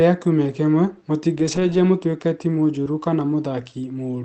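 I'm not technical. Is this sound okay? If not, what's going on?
No. Two kinds of problem can be heard in this speech.

From 1.35 to 1.77 s, a run of lost packets was rebuilt from error correction. Each missing piece was replaced by a lower-quality backup copy. You hear no gap, but for about 0.2 s the speech sounds rougher and noisier. The same happens briefly at 2.86 s.

From 2.83 to 2.88 s there is a short concealed packet loss. About 20 ms of sound never arrived in time. The receiver covered the hole by stretching the sound just before it, then blending back. This comes across as a quick smear or wobble.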